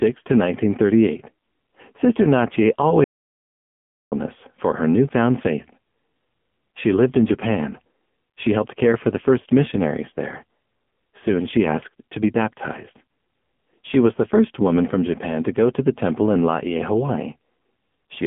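Audio dropout to silence runs from 3.04 to 4.12 s in this speech recording: for about 1.08 s the signal falls to silence with no room tone, most likely because the input link failed or was briefly muted. AMR narrowband mobile codec damage is heavy throughout: the band is squeezed to roughly 150 Hz to 3.4 kHz with nothing above 3.5 kHz, and the buzzy, synthetic texture points to a low bitrate around 6.7 kbps.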